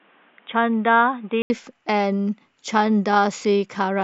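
From the start to 1.5 s the speech sounds dull and boxy, with nothing above 3.7 kHz, a few decibels quieter and carrying its own faint background noise. At 1.5 s there is a gap of about 80 ms, and then the full band returns. The likely cause is an input switched to a poorer device, such as a headset's call profile. On a spectrogram the first 1.5 s shows a hard ceiling at 3.7 kHz, and the waveform shows a brief flat line at the switch.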